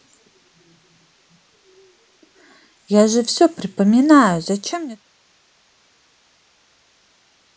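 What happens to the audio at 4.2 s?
At 4.2 s the speech carries on intact, with no dropout, click, distortion or level change.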